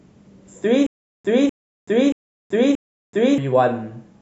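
From 0.87 to 3.38 s the speech breaks into a stutter with silent gaps. A burst of about 248 ms repeats four times, each followed by 381 ms of dead silence, every 629 ms. The likely cause is a stalled stream replaying its last fragment. The missing speech is lost.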